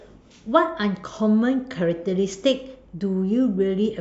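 No technical faults can be heard anywhere in the recording.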